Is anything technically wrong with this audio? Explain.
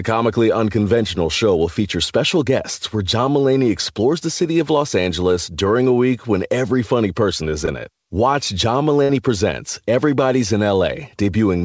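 Yes, there are two packet-loss faults on this G.722 call, whose audio stops at 8 kHz.

Short concealed packet loss, 7.66 to 7.69 s, just after "every funny person is": about 20 ms of audio arrived too late, and the receiver extended the preceding sound, leaving a brief smear.

Burst of packet loss, 9.03 to 9.11 s: about 60 ms of consecutive audio was lost. The decoder continued and faded the last sound, a held tail, before resuming with that stretch missing.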